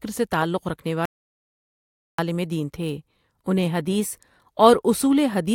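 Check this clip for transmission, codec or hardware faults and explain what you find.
One fault is present: an audio dropout to silence from 1.05 to 2.19 s. The input was likely lost, with the recorder writing silence for about 1.13 s, so the speech cuts off abruptly into dead silence with no room tone and resumes mid-flow at "دین تھے انہیں حدیث".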